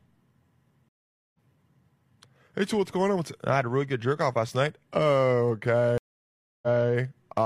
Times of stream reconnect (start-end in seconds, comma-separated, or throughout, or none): 0.89-1.38, 5.98-6.90